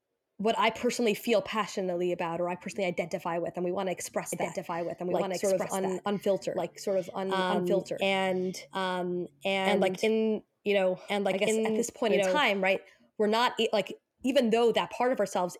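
A second path is likely mixing the same speech in again, producing a doubled audio track from 4.33 to 12.77 s: a full-level copy trails about one and a half seconds behind, starting after "we want to express" and cutting off before "we're not like even".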